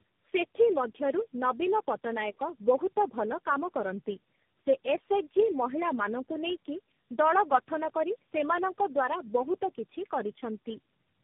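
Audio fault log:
Throughout: tandem speech coding. The speech sounds like it was squeezed through several low-rate speech codecs in a row, likely about four, consistent with a chain such as G.729A, AMR-NB and G.726 joined by G.711 links. Each stage re-encodes the previous stage's errors, so the roughness and warbly, watery texture stack up. Nothing reaches above 3.7 kHz, which adds a muffled, narrowband character.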